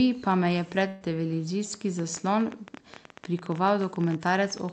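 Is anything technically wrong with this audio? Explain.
Yes, there are two faults.

From 0.87 to 1.03 s, just after "pa me je", the speech stops moving forward. For about 130 ms the last sound is stretched into a steady tone that fades away, and then the talker resumes slightly further along. This is a burst of packet loss. Roughly 140 ms of audio never arrived in time, so the receiver extended and faded the final sound to fill the gap, and the speech from that stretch is gone.

From 1.99 s to the end of the clip, a train of clicks ticks over the audio at about 14 per second with uneven spacing. The clicks peak a little louder than the speech and can be heard through the pauses as well. Because they keep the same shape and sit on top of the signal, they are likely interference from nearby equipment or a faulty connection or power supply, not part of the recording itself.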